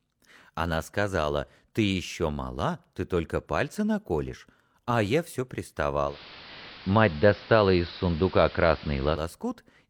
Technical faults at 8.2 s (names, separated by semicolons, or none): digital radio blending to analogue